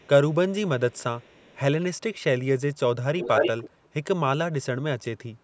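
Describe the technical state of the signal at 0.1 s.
A very faint copy of the speech, lagging about 298 ms, runs from 0.0 to 0.09 s; this is likely echo leak from incompletely cancelled loudspeaker pickup.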